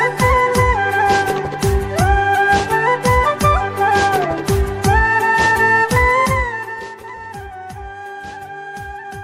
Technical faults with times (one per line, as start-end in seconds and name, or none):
6.21-6.92 zipper noise